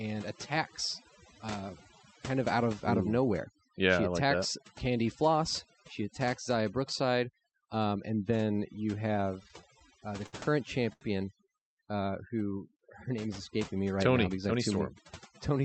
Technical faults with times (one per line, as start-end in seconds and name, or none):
0.00-15.65 overdone noise removal
9.43-10.36 repeated stalls (stutter)
10.93-11.04 short stall from a late packet
14.24-14.78 jitter buffer speed-up